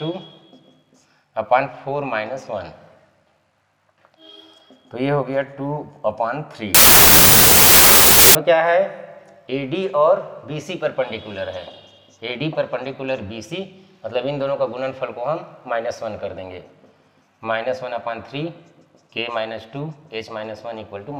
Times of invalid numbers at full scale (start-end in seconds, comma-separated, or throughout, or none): none